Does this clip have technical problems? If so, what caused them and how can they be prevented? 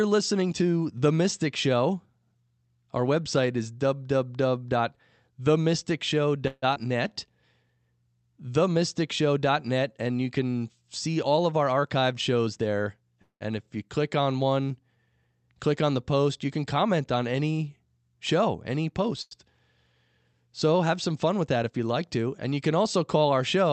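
Yes. Between 6.47 and 6.64 s, and again between 13.22 and 13.43 s, the speech stops and the last sound trails on as a fading buzz that dies into near-silence before the talk resumes where it left off. This is a call audio freeze, likely caused by packets held up in transit until the jitter buffer ran dry. A larger jitter buffer target and a steadier network path help prevent it.

At 6.74 to 6.78 s there is a brief smear where about 40 ms of sound is lost. This is short concealed packet loss: the decoder never received that audio and extended the preceding sound before blending back. Forward error correction or redundancy would help.

From 6.88 to 7.14 s the speech drags, at 88% of normal speed and the same pitch, with sounds drawn out by about 41 ms in total. This is a jitter buffer slow-down, where repeated pitch periods rebuild a depleted reserve. A steadier buffer target would prevent it.

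From 11.08 to 15.51 s, between "and you can" and "click on the post", the speech runs slightly fast at 104% with unchanged pitch, dropping roughly 150 ms. From 21.33 to 21.79 s, between "have some" and "like to", it hurries more noticeably at 110%, losing about 50 ms. Both are jitter buffer speed-ups, where the receiver trims pitch periods to shed excess delay. Smoother packet delivery would prevent them.

Right after "on any show any", from 19.22 to 19.33 s, a sound is held too long, with a slight buzz or dip. This is a short stall from a late packet: the buffer emptied for 92 ms and the receiver stretched the audio until the packet arrived. A slightly deeper buffer would absorb such delays.

The call path itself, Opus at 48 kbps, limits the audio to about 8 kHz.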